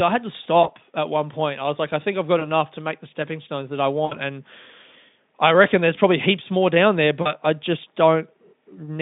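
At 0.63–0.69, 2.39–2.43, 4.06–4.17 and 7.21–7.37 s comes VoIP packet loss concealed by the speech codec. Gaps fitting roughly one, one, three and two lost 20 ms frames are bridged by repeating the last pitch, heard as fading buzzy or noisy smears. A spectrogram shows flat, decaying harmonic stripes.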